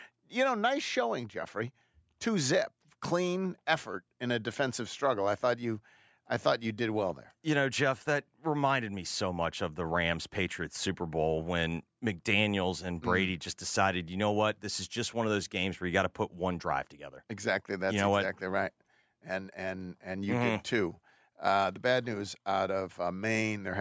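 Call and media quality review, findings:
No faults found: the speech passes through the call's microphone processing as expected, with content up to 8 kHz and the usual high-pass trimming of the lowest bass.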